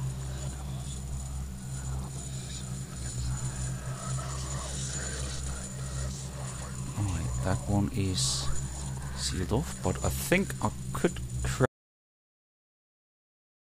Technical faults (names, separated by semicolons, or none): audio dropout to silence